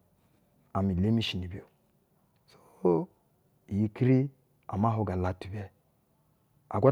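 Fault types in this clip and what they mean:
No fault types are present in this clip.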